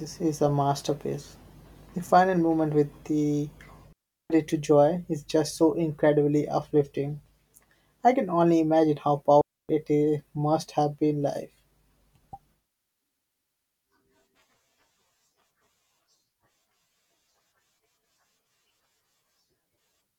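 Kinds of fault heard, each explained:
Digital wireless dropout: the radio link between transmitter and receiver lost too much data, so the receiver muted its output with a very quick fade rather than pass on corrupted audio. In this speech the result is two clean holes of near silence, with no crackle or noise burst either side: about 0.37 s from 3.93 s, right after "final movement with the", and about 0.28 s from 9.41 s, between "can only imagine how" and "it is must have".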